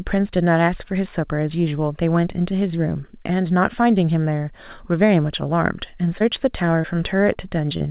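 Short concealed packet loss strikes four times late in the clip, at 6.18, 6.82, 7.33 and 7.77 s. Each time about 20 ms of the call arrived too late for the decoder, and the receiver covered the gap by extending the preceding sound, its pitch where voiced and shaped noise where not, before fading back to real audio. Each one is heard as a brief smear or wobble. The call-codec band limit stops everything above 4 kHz.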